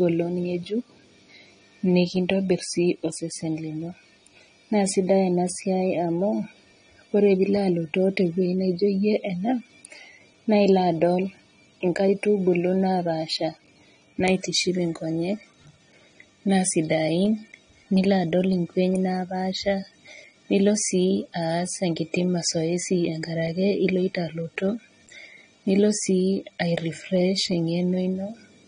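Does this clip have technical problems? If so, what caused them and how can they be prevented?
Yes. AAC compression damage runs throughout: the speech is dull, with nothing above 9.7 kHz, and sibilants and sustained sounds take on a smeared, warbling texture. The likely cause is AAC-LC coding at a low bitrate, one that fits about 32 kbps, where the encoder removes the highs and coarsely quantises what remains. Encoding at a higher bitrate, or keeping a lossless master, would prevent it.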